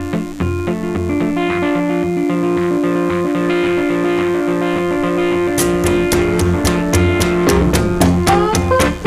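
From start to finish, mains buzz rides under the audio. Sharp switching spikes from a dimmer, a rectifier or an unshielded line have got into the signal path, repeating twice in every cycle of the 50 Hz supply. Those spikes spread energy across a long series of 50 Hz harmonics reaching up to several kHz, so the result is a steady, raspy buzz rather than a smooth hum, sitting roughly 25 dB below the wanted sound throughout.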